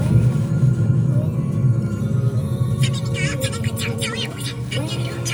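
A wrong sample rate runs through the whole clip, from start to finish. The samples reach the output at a faster rate than they were captured, with no conversion in between, so every event plays back 1.5 times too fast and 7.02 semitones too high, roughly a perfect fifth. That ratio fits audio recorded at 32 kHz being played at 48 kHz. Timing and pitch shift together, making the sound hurried, clipped in its rhythms and unnaturally bright.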